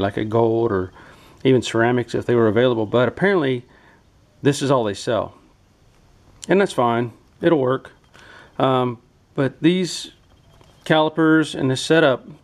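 No technical faults can be heard anywhere in the audio.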